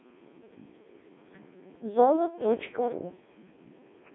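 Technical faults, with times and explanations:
Throughout, Codec 2 vocoder: the speech is robotic and buzzy, with heavy damage across the whole clip. The decoder rebuilds the speech from sine waves driven only by pitch, voicing, energy and a coarse spectral envelope, so the original waveform never arrives. The very sparse, smeared detail fits a rate around 1.2 kbit/s. The band is narrowed to radio width, roughly 200 Hz to 3.5 kHz, with nothing above 3.6 kHz.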